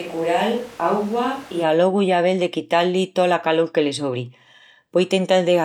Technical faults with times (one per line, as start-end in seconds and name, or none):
0.00-1.62 switch to a distant microphone